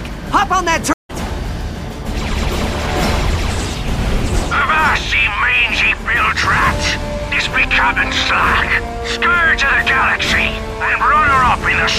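Right near the start, at about 0.93 s, there's a stream reconnect. The connection dropped, so the player went quiet for roughly 160 ms, then picked the stream back up with a fresh decoder around 1.11 s. Because it rejoined a live feed, the sound doesn't continue where it left off: it jumps ahead by about a fifth of a second, so a small chunk is simply gone. The restart comes in softened or muted for a moment, then carries on.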